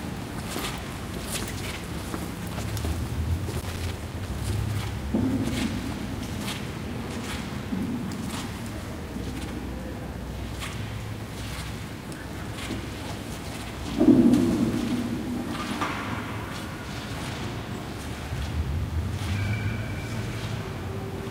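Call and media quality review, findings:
Loose connector crackle, irregular scratchy bursts at 3.53–4.29 s and 8.87–9.13 s. Worn or dirty contact making and breaking, chopping the signal; check the cable and jack.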